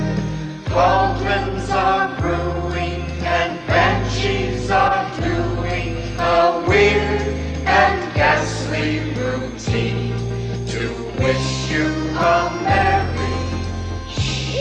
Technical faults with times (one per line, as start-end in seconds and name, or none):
none